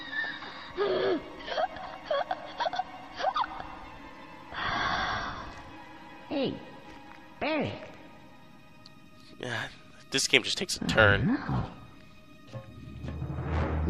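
No technical faults can be heard anywhere in the audio.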